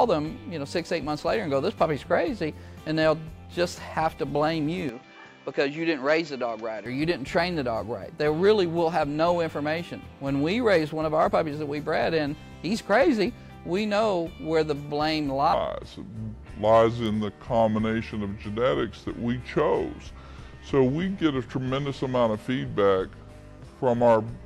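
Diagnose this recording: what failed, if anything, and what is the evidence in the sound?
At the driver stage the input likely switched to a poorer device from 4.89 to 6.86 s: narrower, duller band, fresh noise about 35 dB below signal.

A section at the wrong speed, likely from editing or playback clock mismatch, runs 0.77x from 15.53 s to the end, slower and about five semitones lower.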